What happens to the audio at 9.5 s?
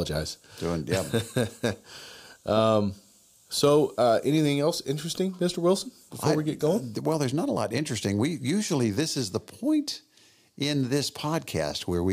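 Nothing goes wrong at 9.5 s; the speech there plays through intact, with no dropout, click, distortion or other fault.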